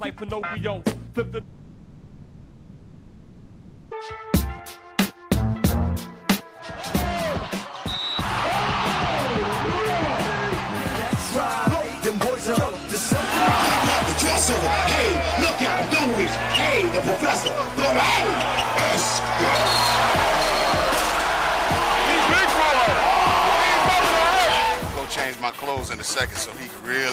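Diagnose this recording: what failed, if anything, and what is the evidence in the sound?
Network stage, likely a long network dropout: from 1.41 to 3.93 s the last sound is stretched into a fading buzz or hiss, and about 2.5 s of audio never returns.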